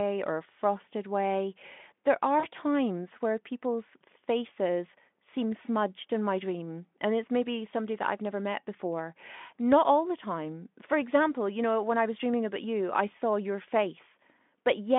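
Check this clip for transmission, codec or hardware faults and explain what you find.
One transmission fault appears, a short burst of VoIP packet loss concealed by the speech codec, from 2.40 to 2.46 s. The sound passes through a Speex link limited to roughly 200 Hz to 3.5 kHz. About 40 ms of audio went missing, which fits two lost 20 ms frames. The decoder filled the hole by extending its last pitch and spectral shape at falling gain, so the sound smears into a brief buzzy tone or coloured noise that fades rather than dropping out. Unlike a plain dropout or clipped gap, there is no silence or click. Because each rebuilt frame feeds the next, the sound stays weak or coloured for a moment after the packets return.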